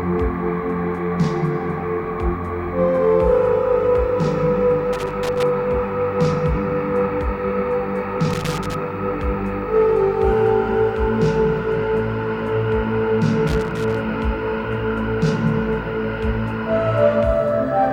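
Irregular bursts of crackle and scratching break into the sound three times: from 4.93 to 5.43 s, from 8.31 to 8.75 s, and from 13.47 to 13.97 s, each lasting roughly half a second. This is loose connector crackle. A worn or dirty contact somewhere in the signal path is making and breaking connection as it shifts, chopping the audio into ragged fragments for the duration of each burst.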